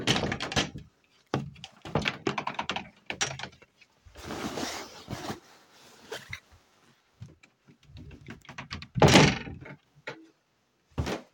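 At 5.19 s there is a small jump in the sound. The likely cause is a dropped buffer (overrun). The samples were overwritten before being collected, so a few milliseconds vanish and the two sides butt together without any gap.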